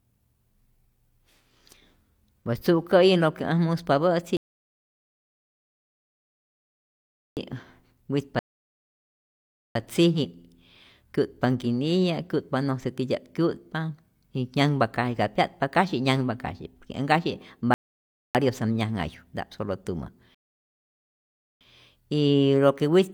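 Four silent gaps interrupt this speech, at 4.37–7.37 s, 8.39–9.75 s, 17.74–18.35 s and 20.35–21.61 s, each resuming exactly where it stopped: rebuffering stalls, the player starving for data, adding about 6.2 s overall.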